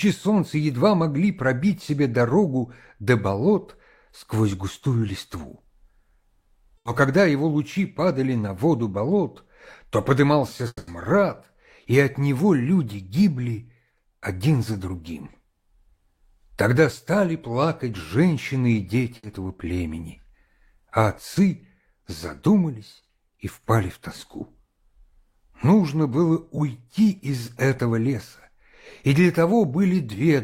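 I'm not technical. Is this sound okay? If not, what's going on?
No. A burst of packet loss hits at 6.77 to 6.87 s and again at 19.17 to 19.25 s. A few chunks of audio never arrived, so the player stretched the last sound into a short fading buzz or hiss, roughly 80 ms and 60 ms, then skipped ahead.

A long network dropout comes at 10.67 to 10.89 s. The sound turns into a fading buzz or hiss for about 200 ms, goes silent briefly, then jumps ahead with a piece missing. The likely cause is the connection stalling for a moment.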